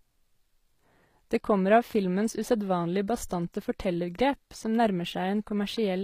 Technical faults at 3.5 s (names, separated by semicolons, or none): HE-AAC compression